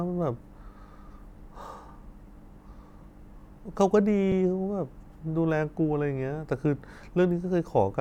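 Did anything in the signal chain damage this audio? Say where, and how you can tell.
Yes. There is an underrun with held sample at about 4.32 s, in the driver or buffer stage. The speech freezes flat for about 2.7 ms, which fits a 128-sample buffer. Almost nothing was lost, so playback resumes where it stopped, with only a soft edge.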